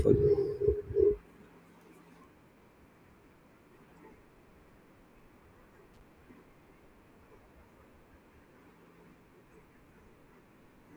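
At 5.94 to 6.01 s the speech is broken by a loose connector crackle: a worn or dirty contact opening and closing as it moves, chopping the signal for about 70 ms. Unlike a single clean digital click, it sounds like an irregular, scratchy burst.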